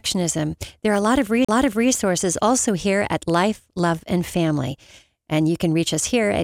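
A CD skip at 1.45 to 1.49 s interrupts this speech recording: the laser jumped tracks, muting for roughly 40 ms before playback resumed elsewhere on the disc.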